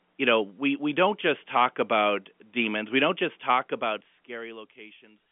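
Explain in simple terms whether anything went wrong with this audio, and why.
Nothing went wrong with this audio, because nothing in the sound breaks, drops out or is disturbed at any point.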